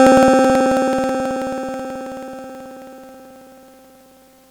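From about 0.07 s right through to 4.44 s the music has periodic USB or driver dropouts: something stalls the audio path every 54 ms, roughly ten milliseconds gets skipped each time, and you hear around seventy evenly spaced ticks riding on the signal.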